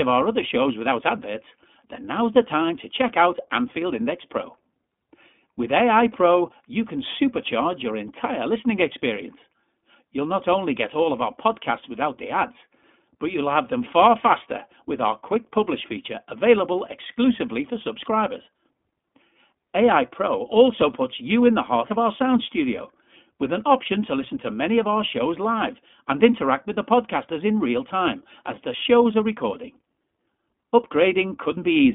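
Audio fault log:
throughout, iLBC codec: the speech sits in a telephone band of 200 Hz to 3.5 kHz, with nothing above 3.7 kHz. Each 20 ms frame's excitation is coded independently, giving a plainly audible rough, synthetic edge that fits a 15.2 kbps mode.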